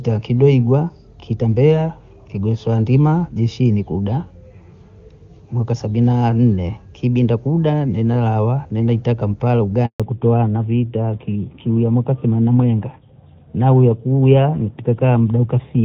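A speech recording carried over a phone call, with two linked faults at the same moment. Just after "kuda nimelawa nimeita kampala" there is a handover gap from 9.86 to 10.00 s. The call was passed from one network link to another, and for 140 ms no speech frames reached the receiver. The voice fades out within a few tens of milliseconds and stays silent until the new link takes over. Whatever was said in that gap is lost. On a waveform this shows as a short flat stretch. On a spectrogram it is a narrow blank vertical band across all frequencies. When the audio resumes at 10.00 s, the fallback to narrowband begins and lasts to the end of the clip. Before the switch the wideband sound, with clear energy up to about 7 kHz, fits AMR-WB (HD Voice) at its top rate of 23.85 kbit/s. Afterward nothing remains above 4 kHz, consistent with AMR-NB at 12.2 kbit/s. The voice becomes duller and loses its crisp sibilants. 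A spectrogram shows a sharp horizontal ceiling at 4 kHz from 10.00 s onward.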